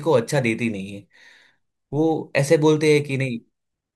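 No technical faults are audible anywhere in the recording.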